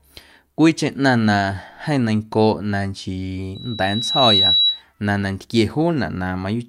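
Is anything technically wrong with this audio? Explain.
Yes. Loudspeaker feedback squeal, 3.55 to 4.82 s, just before "na nantquie". The microphone hears its own loudspeaker, so a 3.9 kHz tone swells to about 5 dB above the speech.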